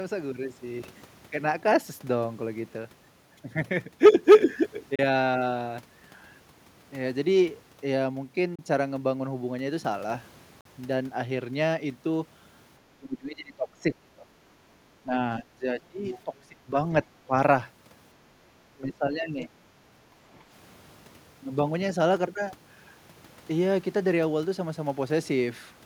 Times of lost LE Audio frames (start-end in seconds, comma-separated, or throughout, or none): none